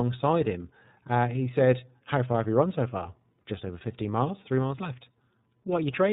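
From start to finish the speech carries the sound of the iLBC codec, and the damage is plainly audible. Everything above 4 kHz is gone, so the speech sounds boxed-in and telephone-like. Each chunk of excitation is coded on its own, with no help from the one before, which leaves a slightly rough, synthetic grain on the speech. The texture fits 30 ms frames at roughly the 13.33 kbps rate.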